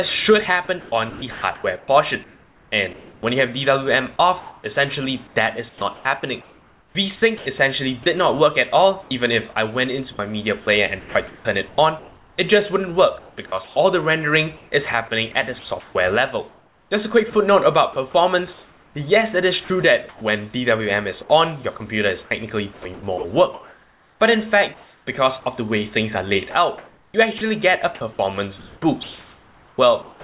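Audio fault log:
0.8–20.21 s, sound chopped by the voice detector: the audio drops out repeatedly, with about 5.4 s in total replaced by a steady synthetic hiss. The likely cause is a sender voice detector toggling transmission and filling gaps with comfort noise.
21.77–30.24 s, sound chopped by the voice detector: the same choppy pattern returns, with quiet stretches and sound edges swapped for comfort noise, about 2.8 s in all. The likely cause is the voice detector again switching off and on. Nothing is heard above 4 kHz here, which fits a G.711 A-law call path.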